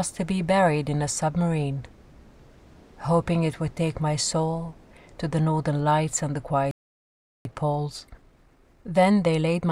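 At 6.71 s the audio cuts off mid-flow and stays silent until 7.45 s, a playback stall of about 0.74 s. The likely cause is the player running out of buffered data or having its output thread blocked, so nothing reached the output until it recovered. On a waveform this shows as a flat line with an abrupt edge on both sides. A spectrogram shows a clean vertical gap with no energy at any frequency.

From 7.45 s to the end at 9.71 s the player works off its backlog with time-compressed catch-up. It trims out small segments and cross-fades the remainder so the audio runs about 1.15 times faster while keeping its original pitch. The result sounds hurried. On a spectrogram, harmonic lines stay at the same heights but events crowd closer together, with smearing at the splice points. The waveform envelope looks compressed in time.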